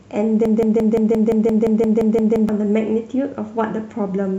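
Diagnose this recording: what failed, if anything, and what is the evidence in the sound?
Broken-record loop, 0.45 to 2.49 s: one 173 ms slice repeats twelve times back to back, likely a stalled playback buffer re-sending its last chunk.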